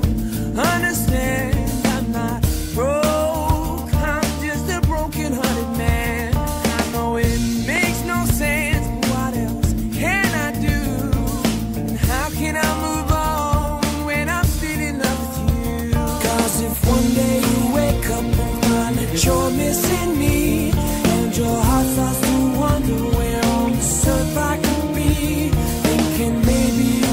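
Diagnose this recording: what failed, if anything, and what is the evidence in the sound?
A single loud pop sits at 7.76 to 7.79 s, peaking about 10 dB above the surrounding sound, which continues underneath it. The stage is likely analogue wiring: a plug, switch or static discharge added a voltage pulse that the following circuits shaped into this sharp transient.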